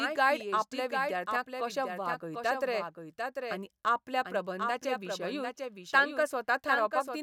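From the very start and all the way through, the speech has a doubled audio track: a second full-band copy trails the original by roughly 0.7 seconds, sitting around 5 dB quieter. It's not an echo, since there's no decay or room colour, just a clean, slightly softer repeat talking over the next stretch. The likely cause is the same signal being picked up twice, once through a slower path, and mixed back in.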